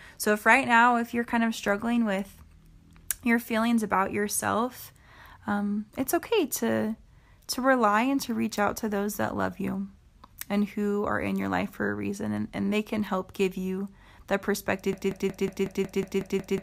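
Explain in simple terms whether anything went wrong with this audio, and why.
Right after "help give you the", at 14.93 s, a broken-record loop starts. A 0.18-second scrap repeats nine times to the end. The player or stream likely stalled.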